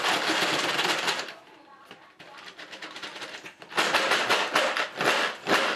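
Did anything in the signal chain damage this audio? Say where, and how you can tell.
No, nothing in the signal chain damaged this audio.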